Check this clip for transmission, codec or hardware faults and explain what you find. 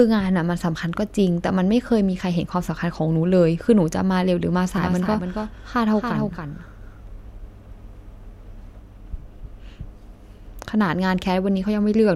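A doubled audio track runs from 4.77 s to 8.79 s: a second full-band copy of the speech trails about 300 ms behind, roughly 5 dB quieter, with no room colour. It starts and stops abruptly, likely from a slower second capture path mixed in.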